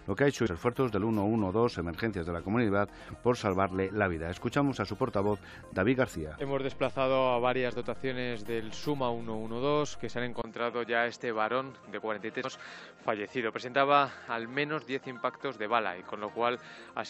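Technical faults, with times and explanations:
0.45–0.48 s, 6.40–6.42 s and 12.44 s, damaged data in a compressed stream: three brief glitches, each about 20 ms or less. Corrupted bytes made the decoder misread those frames, lose sync and hunt for the next valid header, so you get a brief glitch.
10.42 s to the end, input switched to a poorer device: after a 20 ms gap, the sound goes dull, with nothing above 8 kHz, a different tone and a new noise floor about 50 dB down, while loudness stays roughly unchanged. That's likely a drop to a narrower-band microphone or headset profile.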